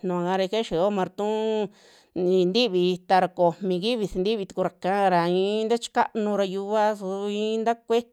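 No technical faults are audible anywhere in this speech recording.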